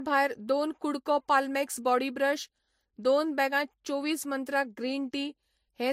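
Speech that has likely passed through transcoding between lossy codecs: an MP3 stage and then a Vorbis stage, at rates that fit roughly 53 and 52 kbit/s. Throughout, both codecs' artefacts are heard layered together, and nothing remains above 16.1 kHz.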